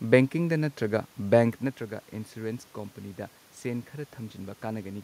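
The signal path shows no technical faults: the background noise is simply the room around the microphone, and the change in level around a second and a half in comes from the talker shifting position relative to the microphone.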